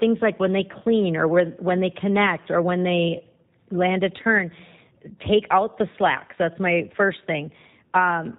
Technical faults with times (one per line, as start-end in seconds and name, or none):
0.00-8.38 G.729 codec